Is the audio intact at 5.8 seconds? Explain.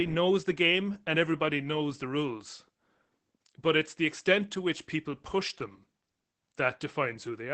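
No. At 5.8 s, as throughout the clip, the speech carries plainly audible Opus voice compression. Nothing is present above about 8.5 kHz, and the speech is muffled, hoarse and somewhat robotic. The cause is Opus's SILK linear-prediction coder working in wideband mode on 20 ms frames. Such a low bitrate, consistent with roughly 12 kbps, forces a narrowed band and a coarsely coded excitation signal.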